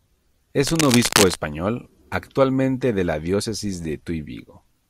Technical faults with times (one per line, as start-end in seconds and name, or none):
0.66-1.35 cable scratch noise